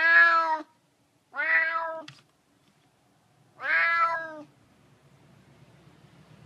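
The audio has compressed frames skipped twice, at 2.00 s and 4.14 s. Around a tenth of a second vanishes at the first spot and about half that at the second, each a multiple of a 26.1 ms frame.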